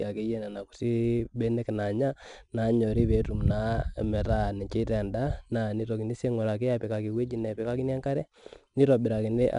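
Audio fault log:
throughout 4-bit ADPCM compression: each sample is coded as a coarse 4-bit step from a prediction, so a gritty hiss rides on the speech and rises and falls with its level. Unlike steady background noise, it vanishes in pauses. Nothing above 10.7 kHz, which fits roughly 89 kbps.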